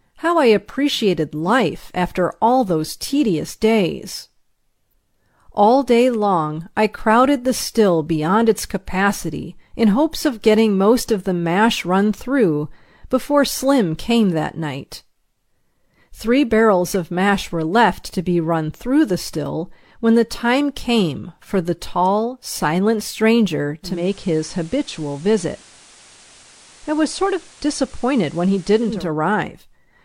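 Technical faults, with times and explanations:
23.81–29.10 s digital radio blending to analogue: after "the tall silent stranger" the digital signal dropped and a 0.29 s cross-fade switched to FM, adding hiss about 25 dB below the signal and lowering the level by about 1 dB.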